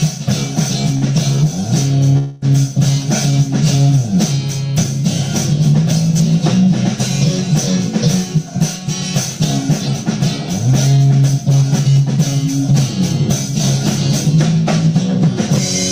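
The audio has three timing faults from a packet-based call path.

At 0.97 to 1.05 s there is a short stall from a late packet. The receiver's jitter buffer ran dry, so it stretched the last sound by 44 ms until the packet arrived, then resumed from the same point. Nothing is lost, but playback now trails by an extra 44 ms. On a spectrogram this appears as a brief stretch where the frequency content is held flat and horizontal. In the waveform it shows as repeated, near-identical cycles.

From 2.18 to 2.45 s a call audio freeze holds the sound for 244 ms, with no stretch falling to silence. This is likely caused by packets held up in transit emptying the buffer. The receiver filled the wait by continuing the last sound as a fading buzz or hiss, then picked up where it left off. That inserts a 244 ms gap and adds the same amount of delay. A spectrogram shows a smeared, decaying band in place of changing detail, and the waveform envelope tapers across that span.

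From 8.38 to 12.18 s a jitter buffer speed-up plays the audio at about 106% speed with the pitch unchanged. This is enough to sound hurried. The receiver trimmed roughly 300 ms in total by cutting out short pitch-period-sized pieces over and over to shed surplus buffered delay. In the waveform, events arrive closer together than they should. On a spectrogram the harmonic spacing stays the same while the time structure is compressed.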